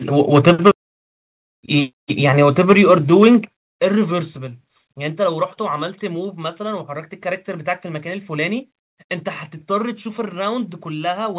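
Microphone overload at 0.34 to 0.7 s, 2.39 to 2.94 s and 3.22 to 3.28 s gives the loudest speech peaks a harsh, crackling edge. The likely cause is an input volume set so high that peaks ran about 3 to 5 dB past the converter's limit, flattening their tops. A small share of samples is clipped in the second burst, and more in the first and third.

Microphone volume stepped down at 0.5, 3.45 and 4.47 s, with voice and background dropping together in single abrupt steps of about 2, 7 and 3 dB. These most probably come from the call software turning down the device's input gain after the distorted peaks that precede the first two steps.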